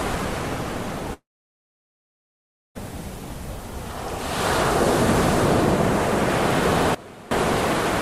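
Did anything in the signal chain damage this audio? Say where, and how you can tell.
Yes. Long network dropout, 1.13 to 2.77 s: a brief fading continuation, then about 1.5 s of silence, likely lost packets concealed until the receiver gave up.

Sudden gain jump, 6.95 to 7.31 s: sound and background noise drop together by about 21 dB with no ramp, likely an unsmoothed digital gain change in processing.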